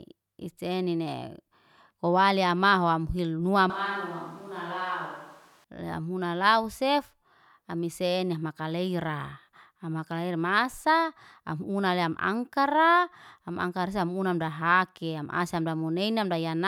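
Between 3.7 and 5.64 s it suddenly goes hollow, roomy and quieter, about 10 dB down. That's likely a switch to a distant microphone.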